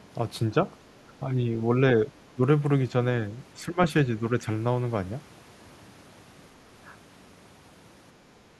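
At 1.05, 2.35 and 3.59 s the speech dips briefly, by roughly 10 to 15 dB. This is speech suppressed in double talk, likely from an echo canceller ducking overlapping sound.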